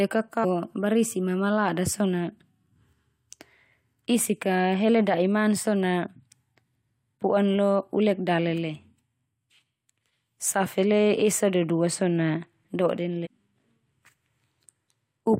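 At 0.43 to 0.45 s, and again at 13.25 to 13.27 s, the speech is broken by short blips from damaged data in a compressed stream. Corrupted bytes make the decoder misread those frames and lose sync until it finds the next frame header, producing a brief chirp or squawk. On a spectrogram each shows as a narrow vertical smear of broadband energy; the waveform shows an abrupt, unnatural discontinuity lasting a few tens of milliseconds.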